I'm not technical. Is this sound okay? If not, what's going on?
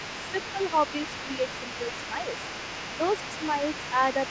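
No. Throughout the clip, from 0 to 4.3 seconds, a second voice can be heard faintly underneath the main speaker. This is the other side's voice leaking through. It likely comes from a loudspeaker that the echo canceller did not fully remove.

At about 0.53 to 0.59 seconds, the main speaker's voice briefly drops a little. This is speech suppressed in double talk. Both people were likely talking at once, and the echo canceller lowered everything for a split second.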